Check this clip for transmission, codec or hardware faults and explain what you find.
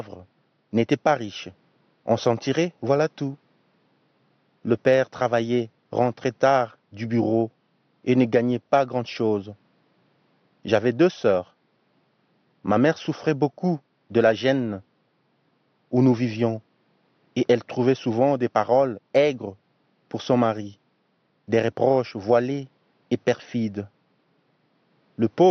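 No faults detected.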